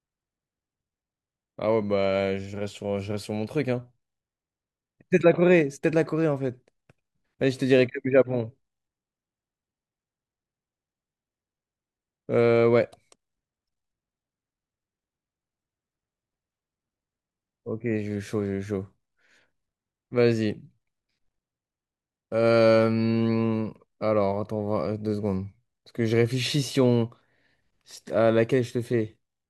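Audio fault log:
No fault is heard in the speech recording. The log has nothing to list for it.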